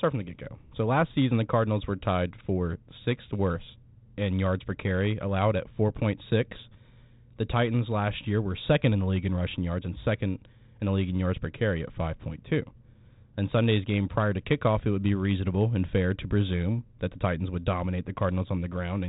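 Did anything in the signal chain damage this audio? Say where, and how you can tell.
No, nothing in the chain has damaged this speech; it sits on a G.726 ADPCM path at what sounds like 32 kbit/s, with nothing above about 3.9 kHz, which is just how that telephone codec normally sounds.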